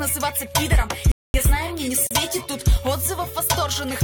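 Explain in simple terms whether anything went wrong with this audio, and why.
Two things went wrong. At 1.12 s the sound suddenly cuts out and stays silent for about a quarter of a second, resuming at 1.34 s. This is a playback stall, most likely because the player ran short of data or was briefly held up, so nothing reached the speakers until it caught up.

A second, much shorter dropout comes at 2.07 s, lasting about 39 milliseconds before the sound picks up again at 2.11 s. This is a gap at a join of encoded pieces: the audio was saved as separate chunks, and the silent padding at each chunk's edge was left in when they were stitched together.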